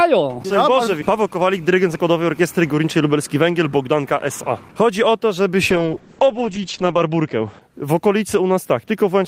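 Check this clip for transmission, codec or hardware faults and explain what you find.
A call bitrate drop runs from 5.71 to 7.67 s. The bandwidth estimate fell and the encoder was starved of bits, consistent with a fall from 32 to about 9 kbps. It coded more coarsely and cut the top band from 20 kHz to 8 kHz. The audio turns muffled and rough, worst for about 1.3 s.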